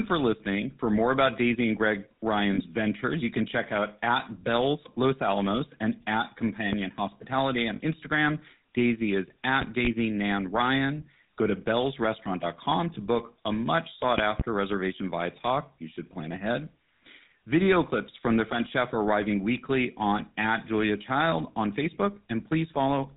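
The whole clip passes through the GSM full-rate codec. It is band-limited below 4 kHz and sounds buzzy and gravelly, which fits the 13 kbps GSM coder.

Lost GSM frames occur at 2.54 to 2.61 s, just before "ventures you can check", and again at 7.76 to 7.81 s. Each time, the last good sound is held as a brief metallic ring. This fits about 40 ms of missing frames.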